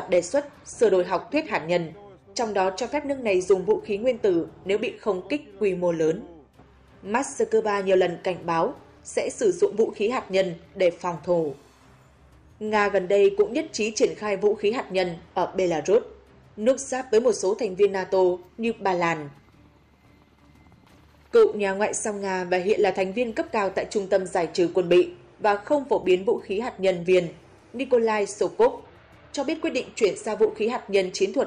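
Nothing in this audio stands out as a technical fault; there's no glitch, dropout or distortion anywhere along the way.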